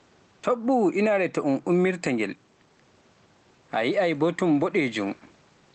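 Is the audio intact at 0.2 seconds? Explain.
No. Gain pumping runs through the whole clip, including 0.2 s, most likely from gain set far too high with a fast limiter clamping down on each loud syllable. The gain swings by around 10 dB.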